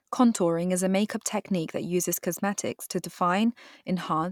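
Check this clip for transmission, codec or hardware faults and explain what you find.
No faults were found.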